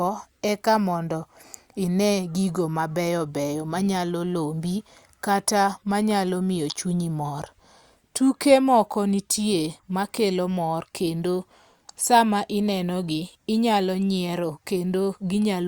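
Nothing in the speech stood out as a technical fault on listening.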